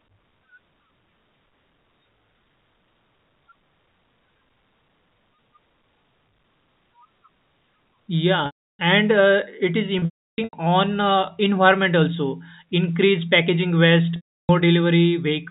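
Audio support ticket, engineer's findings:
Packet loss with pitch repetition, three events. 8.46 to 8.79 s: about 330 ms dropout, held buzzy tone decaying to silence, speech resumes via short cross-fade. 9.99 to 10.53 s: scattered losses over about 540 ms, longest run 330 ms, repeated buzzy fills. 14.16 to 14.49 s: same 330 ms pattern. Probable cause: network drops; receiver concealment repeats last pitch period, fades within about 50 ms. Gap lengths fit 30 ms packets. Underlying G.711 A-law telephone band shows faint or no coding damage.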